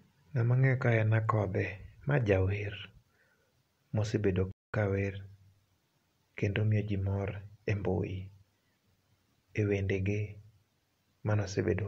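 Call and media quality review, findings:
Speech drops to silence mid-flow from 4.51 s to 4.74 s, a 221 ms gap, then carries on. Playback stall, likely in the player: buffer ran dry or its output thread was blocked, leaving the device nothing to play until recovery.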